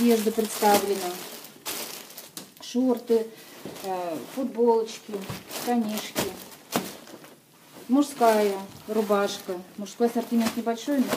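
No technical faults are audible anywhere in the audio.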